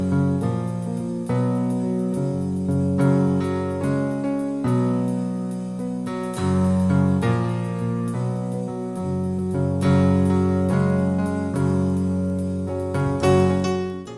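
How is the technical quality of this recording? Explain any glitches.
A resampler restarted on every block affects the final stretch. From 10.8 s to the end, each 100 ms block is converted from 48 kHz to 24 kHz on its own. Edges lack neighbouring samples, giving regular ticks at 10 Hz under the signal.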